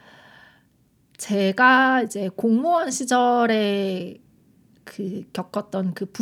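No technical faults can be heard anywhere in the recording. There are no events to place on its timeline.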